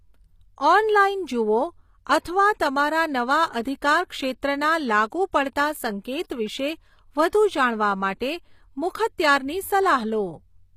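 Throughout, the speech is likely HE-AAC compressed, pointing to a low bitrate. Treble is rebuilt from copied lower bands, so s sounds turn gritty and lispy, with nothing above 15.5 kHz.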